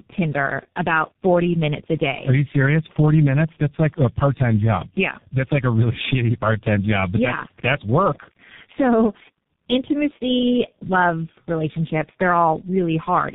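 Throughout the recording, the speech goes through tandem speech coding: three speech codecs in a row, consistent with a G.729A, CVSD and G.723.1 chain. Each re-encodes the previous one's degraded output, leaving rough, muffled, warbly speech with nothing above 3.8 kHz.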